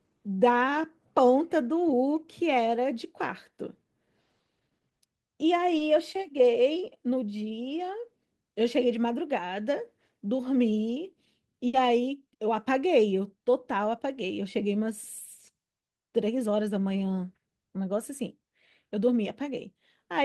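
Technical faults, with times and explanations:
5.77 to 5.81 s, short concealed packet loss: About 20 ms of the speech never arrived in time, and the receiver filled the hole by stretching the preceding sound for roughly 20 ms before crossfading back into real audio. It is heard as a tiny smear or wobble in the flow of speech. On a spectrogram the harmonics or noise band run on unchanged for a sliver, then join the true signal; the waveform shows a briefly repeated, slightly smoothed cycle.
11.67 to 11.75 s, burst of packet loss: Around 60 ms of consecutive audio was lost, and the receiver extended the last sound while fading it down across the gap, so the speech turns into a brief held buzz or dying hiss before resuming further along, with that stretch missing. On a spectrogram the formant pattern freezes into flat horizontal bands that thin out. The waveform shows a decaying, self-similar repetition, then an abrupt change of shape where real audio returns.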